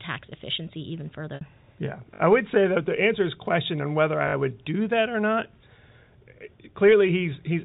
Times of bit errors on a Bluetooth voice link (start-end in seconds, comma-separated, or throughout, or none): none